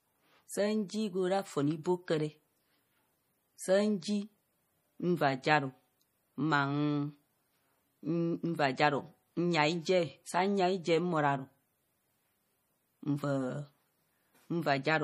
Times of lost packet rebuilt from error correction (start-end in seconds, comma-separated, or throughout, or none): none